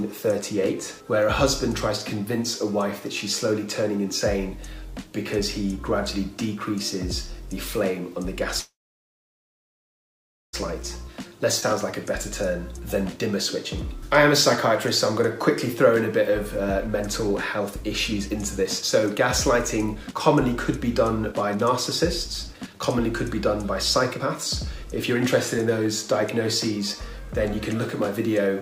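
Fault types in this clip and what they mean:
Call audio freeze: From 8.59 to 10.55 s the sound stops and is continued by a brief fading fill that drops to near silence for about 1.8 s before playback resumes from exactly where it left off. Nothing is lost, but the pause adds nearly 2 s of delay. The likely cause is packets held up in transit, so the jitter buffer ran dry and the receiver had to bridge the wait.
Jitter buffer speed-up: The audio runs noticeably hurried while keeping its pitch, most clearly from 17.59 to 22.80 s and from 24.14 to 26.03 s at about 110% speed. Milder stretches run from 11.07 to 11.74 s at 104% and from 26.71 to 28.61 s at 106%, with a sharp 145% burst at 12.73 to 12.81 s. The receiver was trimming pitch-period-sized slices to drain excess buffered audio, removing roughly half a second in the longest stretch.
Skip ahead: At 11.61 to 11.64 s playback lurches forward, with only a tiny joining fill of about 12 ms between two sides of the sound that never belonged together. 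Roughly a second of audio is simply gone. A stretch was dropped while later audio was already waiting, which cuts the accumulated delay by about the same second.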